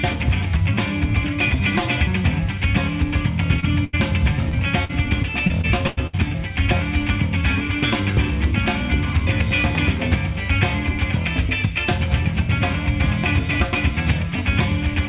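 A brief smear passes at 3.6 s, and two more follow at 4.49 and 4.85 s, each slightly longer and closer to a short wobble. These are short concealed packet loss: roughly 20 ms of audio at 3.6 s and about 40 ms at each later point never arrived in time, so the receiver extended the preceding sound for 24, 38 and 44 ms respectively before blending back into the real signal.

Between 3.84 and 3.95 s the sound is held and fades, then jumps ahead. This is a burst of packet loss: about 80 ms went missing in a row, and the receiver stretched the last sound over about 85 ms while lowering its level. When the audio resumes, the part in between is simply gone.

From 5.47 to 6.15 s the audio turns choppy, with pieces dropping out. This is repeated packet loss: four separate gaps, the longest about 95 ms, added up to about 200 ms lost. Around 29 percent of that stretch is patched-in sound rather than the original, and each gap follows soon after the last.

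Throughout, nothing can be heard above 4 kHz, which fits a narrowband call codec on the call path.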